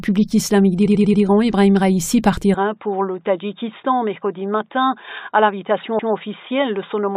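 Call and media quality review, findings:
Repeated frames, 0.85–1.22 s: stutter, a 93 ms stretch of audio played four extra times back to back. Adds about 0.37 s. Points to a few compressed frames rewritten or resent upstream of the decoder.

Repeated frames, 5.98–6.12 s: single repeat of a 139 ms block, adds that much time. Differs from loss concealment: an exact copy, not a smeared fill-in, and the timeline lengthens instead of holding.

Input switched to a poorer device, 2.54 s to end: abrupt dulling, nothing above 3.8 kHz, level down about 5 dB, new faint noise floor far below the signal, no gap at the switch. Likely a change of capture device or headset call profile. Unlike a codec bandwidth drop, tone, level and background change together at one instant.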